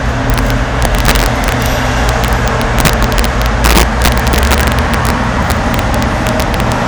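Violent, splintering cracks burst out on the loudest moments from start to finish, far harsher than ordinary clipping, while quieter passages of these sounds pass between them. This is integer overflow: the signal was driven about 5 dB beyond the top of the integer range, and instead of being held at the limit, each peak that crossed it wrapped around to the opposite extreme. Under one percent of samples are affected, but each wrap is a full-scale jump, which is why each peak over the limit snaps so sharply.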